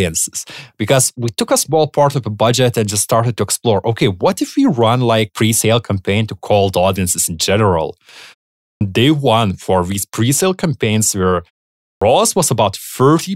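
Speech with a clipped start after a pause, twice: at 8.70 s, just before "day one for these", and at 11.90 s, just after "campaigns where". Following silences of 0.44 s and 0.48 s, the first 0.11 s of sound is swallowed while the output device wakes and relocks, so speech begins abruptly.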